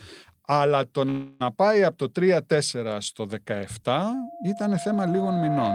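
At 1.09 s the speech freezes for about 0.31 s into a fading buzz, then resumes intact, likely a call audio freeze from delayed packets draining the jitter buffer. From 4.13 s to the end, a loudspeaker feedback squeal builds at 688 Hz, swelling over roughly two seconds to sit about 5 dB above the speech.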